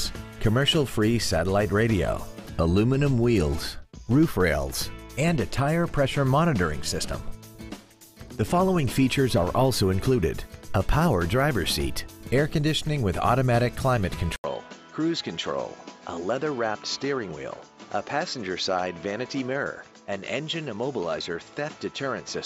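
At 14.36 s the sound breaks off for 80 ms, then resumes until the end with nothing above 7.6 kHz, around 5 dB quieter, and over a new background noise roughly 30 dB below it. The likely cause is an input switched to a poorer device. The short gap, the shift in level and the new noise floor arriving together set this apart from a plain bandwidth loss or a filtering change, which would only dull the top end.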